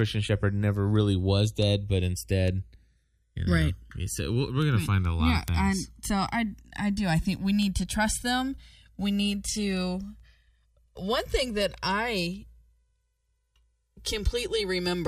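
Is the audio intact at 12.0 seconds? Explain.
No. Channels drifting apart affects the whole clip, including 12.0 s. The two channels run on separate clocks about 150 ppm apart, so their offset grows to around 2 ms by the end. Summed to mono, comb notches sweep slowly through the speech, heard as slow flanging.

Word clock ticks also run from 0.34 s to 14.91 s, so 12.0 s falls inside them. An unlocked receiver, off by around 50 ppm, slips one sample roughly every 0.4 s, about 40 times in all. These slips are heard as a steady series of sharp ticks of uneven strength.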